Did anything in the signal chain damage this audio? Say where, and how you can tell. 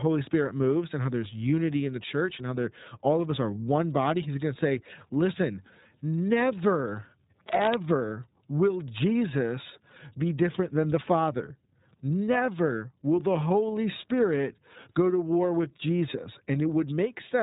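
Yes, at the codec stage. Throughout the speech, nothing passes above about 3.8 kHz, and the voice has a plainly audible rough, synthetic edge. On a spectrogram the energy stops at a hard ceiling near 3.8 kHz, with blocky smearing that repeats in a 30 ms rhythm. That fits the iLBC codec, which codes each 30 ms frame on its own, here at a rate that points to its 13.33 kbps mode.

The second fault is in the analogue wiring. From 7.41 to 7.77 s there is a burst of cable scratch noise, a dense, uneven rustling only a little quieter than the speech. On the waveform it shows as jagged, irregular spikes riding on the signal. On a spectrogram it appears as broadband speckle filling the whole band for that short span. The likely cause is a worn cable or connector being moved, so that its contact resistance changed rapidly.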